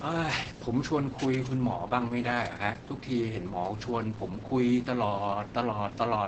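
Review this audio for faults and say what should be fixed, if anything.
The speech sounds muffled, hoarse and slightly robotic for the whole clip, with nothing above about 8.8 kHz. This is Opus voice compression at a very low rate, which points to around 10 kbps. The SILK linear-prediction coder has limited the signal to wideband and coded the excitation coarsely. To prevent it, encode at a higher Opus bitrate or keep an uncompressed master.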